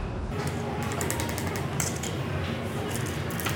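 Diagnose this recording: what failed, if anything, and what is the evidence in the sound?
A wrong sample rate fault at the playback stage. From 0.32 s to the end at 3.56 s, the sound runs twice as fast and an octave high, 12 semitones up. The samples are clocked out at double speed without conversion, which fits 24 kHz material played at 48 kHz.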